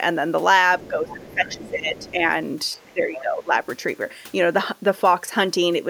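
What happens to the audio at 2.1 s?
Speech suppressed in double talk runs from 0.81 to 2.23 s, so 2.1 s falls near its end. The speech level sags and drops away in patches, sinking by roughly 15 dB at its deepest, with the thinning spread across about one and a half seconds. The likely cause is an echo canceller that, facing two people talking at once, could not tell the local talker apart from loudspeaker echo and attenuated everything it heard.

Overlapping that, from 1.97 to 2.11 s, the other side's voice is leaking through: a faint, brief second voice sits some 25 dB under the main speech. It likely comes from the far end's voice playing on the device's loudspeaker and reaching the microphone, with the echo canceller leaving a residue of it in the signal.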